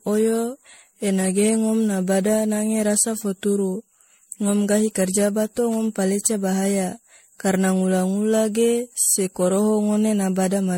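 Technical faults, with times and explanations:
Throughout, generation loss: the speech sounds swirly, hollow and smeared, with consonant attacks blurred and no content above 16.5 kHz. This is likely the result of repeated MP3 encoding, around seven passes at a rate that points to 64 kbit/s. Each decode and re-encode quantises the signal again on a shifted frame grid, so noise and spectral gaps pile up across generations, leaving more damage than a single encode at that bitrate would.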